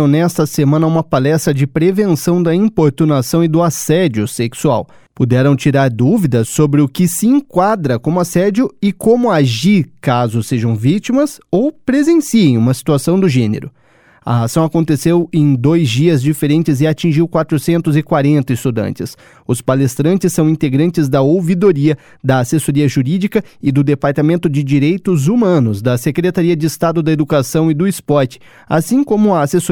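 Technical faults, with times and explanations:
14.18 to 17.24 s, sample clock jitter: for about three seconds the converter's clock wobbles, on the order of a couple of microseconds, so each sample lands a touch early or late. Where the waveform is moving fast, that timing slip becomes an amplitude error, here sitting roughly 40 dB under the signal. You hear it as a fine hiss or grittiness riding on the louder, brighter parts of the sound, which disappears whenever things go quiet.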